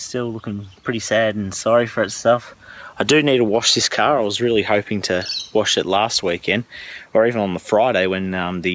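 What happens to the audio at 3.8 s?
At 3.8 s the audio is caught in gain pumping that runs through the whole clip. The level breathes, with a swing of around 5 dB. Loud and quiet parts sit unnaturally close together, giving a squashed, pumping character. The likely cause is input gain set far too high, with a fast limiter or compressor clamping down on every peak and releasing between them.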